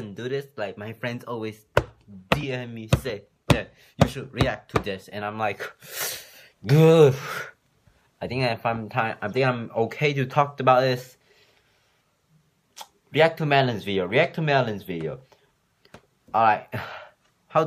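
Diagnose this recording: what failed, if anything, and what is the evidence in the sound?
Nothing in the recording points to a failure at any stage of the chain. No event in the sound calls for a time stamp or a mechanism, so there is nothing to diagnose.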